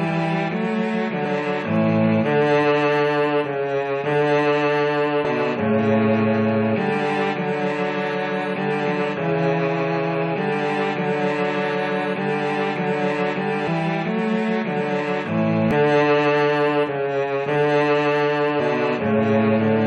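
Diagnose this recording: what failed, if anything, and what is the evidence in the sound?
The failure is at the codec stage: damaged data in a compressed stream. Brief glitches sound at 1.24, 5.24, 13.64–13.68, 15.71 and 18.59 s. Corrupted bytes make the decoder misread frames and lose sync until it finds the next frame header.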